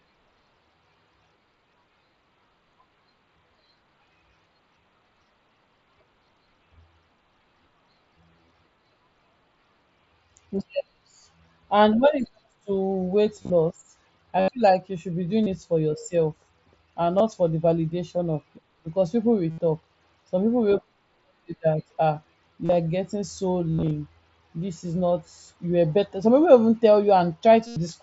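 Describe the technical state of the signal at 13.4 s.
Concealed Bluetooth headset packet loss runs from 13.36 to 13.50 s. Packets dropped between headset and phone, about 83 ms in total across 135 ms. The receiver filled each gap by repeating recent waveform. The longest run, 30 ms, gives a brief buzzy hold and a small warble.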